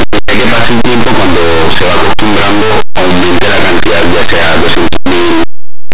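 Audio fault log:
Throughout: linear audio read as companded. Plain 8-bit samples are expanded as mu-law codes. Values just on one side of zero jump to huge outputs while those on the other side stay small, giving harsh, very loud distortion.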